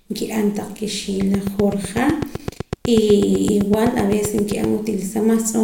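Right after "nki'an taq", at 1.21 s, a train of clicks starts up and runs until 4.65 s. It's a steady ticking at about 7.9 clicks per second, evenly spaced, so roughly thirty near-identical pops in all. They stand out well above the speech, something like 10 dB hotter, and keep going through the pauses too. That regular pulse is likely interference from nearby gear or a faulty connection or power supply.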